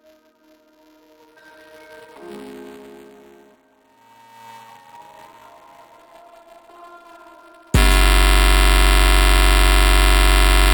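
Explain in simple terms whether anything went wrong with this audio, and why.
Two things went wrong. Throughout the clip there is a steady robotic buzz, around 345 Hz, whenever sound is playing. This is buffer tearing: the program filling the audio buffer and the hardware reading it slipped out of step, so a small slice of each buffer holds audio from about 10 ms earlier, which fits a 128-sample buffer.

From 8.04 s to the end, a short fragment repeats as a stutter about 23 times a second. This is a system hang loop: the computer froze while the sound hardware kept replaying the same 42.67 ms piece, which fits a 2048-sample buffer.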